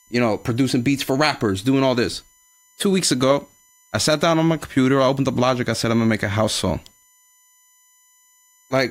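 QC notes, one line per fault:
Throughout: USB whine. A fixed-pitch whine sits under the speech, built on 1 kHz, with its strongest component at 7 kHz. It stays roughly 35 dB below the speech. The bus draws current in 1 ms frames, and that pulsing leaks in through power or ground.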